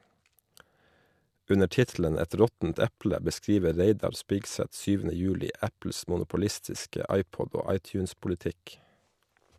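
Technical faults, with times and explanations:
No faults can be heard anywhere in this speech recording. Nothing in the audio points to a problem in how it was captured or carried.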